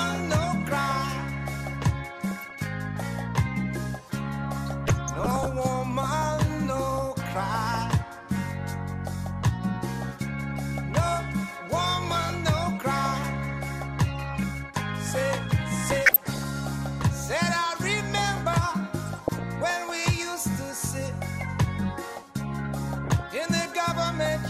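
The audio carries a dull, granular coloring from start to end. The top end is thin, and upper detail flickers in and out with a plainly audible gurgle underneath. That is the sound of MP2 compression. The likely cause is MPEG Layer II coding at a low rate, which fits about 80 kbps. Too few bits reach the upper sub-bands, so some drop out entirely. The bands that remain are coarsely quantised. On top of this come six bursts of DAB burbling. They fall at 2.25 to 2.55 s, 4.66 to 5.67 s, 14.25 to 14.43 s, 15.92 to 16.45 s, 19.07 to 19.44 s and 22.88 to 23.23 s. Each brings short blips of noise in single sub-bands. Bit errors have slipped past the error correction and corrupted samples. The error rate points to a few tenths of a percent.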